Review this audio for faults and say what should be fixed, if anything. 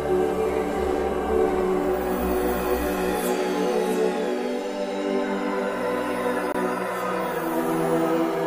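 A brief hole opens in the sound from 6.52 to 6.55 s, and the audio picks up afterwards as though it had kept playing underneath. This is likely a Bluetooth dropout: about 23 ms went missing, which fits a single packet failing to reach the headphones in time. Keeping the source device close, with a clear line of sight and less 2.4 GHz congestion, would prevent it.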